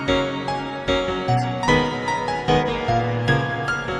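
Two brief glitches cut through the audio at 1.38 to 1.46 s and 2.61 to 2.74 s, each a corrupt frame decoded: damaged data across a few frames played as misplaced spectral energy.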